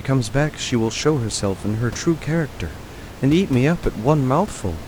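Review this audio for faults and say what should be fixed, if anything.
Nothing here needs fixing, as no technical faults can be heard in the speech. A low room noise sits about 16 dB below the voice, and it belongs to the recording space rather than to the system.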